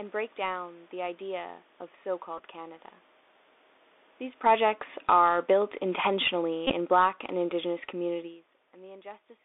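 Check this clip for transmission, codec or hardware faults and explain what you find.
Three kinds of fault are audible: narrowband Bluetooth headset coding across the whole clip, two short stretches of repeated headset packets, and two spells of automatic gain pulling the level down.

The Bluetooth CVSD headset codec is present from start to finish, and the damage is plain. The band runs only from about 300 Hz to 3.6 kHz, so everything bright is gone. The 64 kbps rate fits CVSD, which encodes one up-or-down bit per sample and adapts its step size. You can hear that in the scratchy sibilants, in the grainy hiss riding under the speech, and in the roughness wherever loud, high-frequency energy outpaces the step.

The Bluetooth headset packet repeated fault shows up twice. The first is at 2.38 to 2.42 s, right after "the idea of so", and runs about 11 ms, which fits roughly three lost 3.75 ms packets. 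The second, at 6.67 to 6.74 s, is longer, about 26 ms, which points to around seven packets. In both, the chip kept re-decoding the last good packet. That repetition every 3.75 ms gives a brief buzz near 267 Hz before the real signal resumes.

Automatic gain falling happens twice. From 4.31 to 5.25 s the level drops by about 9 dB, and from 5.83 to 8.3 s by about 6 dB. Each time, the gain control judged the input too loud or its background noise too strong and eased its gain down gradually, so the speech and the room noise beneath it sink together instead of just the voice. That shared drop sets it apart from the talker shifting position around 4.5 s and 8 s, which changes only the voice level.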